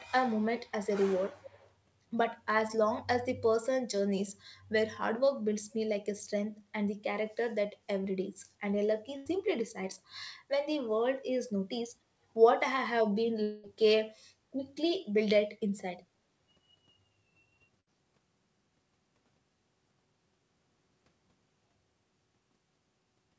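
Echo leak, from 0.67 to 1.05 s and again from 1.37 to 1.71 s: a faint second copy of the speech trails the original by 274 ms, sitting roughly 20 dB below it. It sounds like a delayed shadow of the talker rather than room reverberation. The likely cause is a far end playing the call through a loudspeaker, where the echo canceller failed to subtract everything its microphone picked back up, so the residue was returned down the line.

Burst of packet loss, from 9.17 to 9.29 s: about 90 ms of audio never arrived in time, and the receiver filled roughly 87 ms of it by extending the last received sound while lowering its level. The result is a brief held buzz or fading hiss in place of the speech, after which the talker resumes slightly further on, with that short stretch skipped.

Long network dropout, from 13.43 to 13.66 s: around 210 ms of audio is missing, and concealment covers about 208 ms of it, so no dead silence appears. 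Instead, the last sound smears into a decaying buzz or hiss before speech returns with the intervening content gone. The length of the gap likely points to a stall in the network rather than a handful of dropped packets.

Burst of packet loss, from 17.80 to 17.90 s: a shorter gap of about 60 ms, concealed for roughly 61 ms, produces a quick frozen or fading fragment. The speech then jumps ahead slightly, with a small piece missing. Throughout the clip, the audio stops at 8 kHz, which fits a wideband call codec.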